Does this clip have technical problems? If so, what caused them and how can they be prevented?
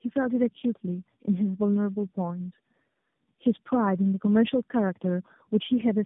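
Yes. Tandem speech coding runs through the whole clip: the speech is rough, muffled and warbly, with nothing above 3.7 kHz. This fits three narrowband AMR-NB coders in a row, each re-encoding the previous coder's errors. Keeping one codec end to end, without decoding at network borders, prevents it.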